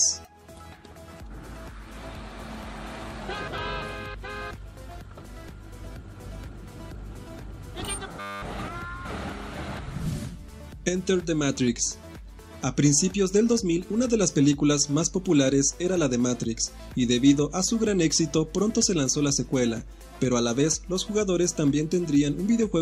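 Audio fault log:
8.2–8.42 s, system hang loop: a steady 100 Hz buzz replaces the sound for about a fifth of a second. The system froze while the audio hardware kept replaying the same 10 ms buffer, repeating one tiny slice exactly until playback recovered.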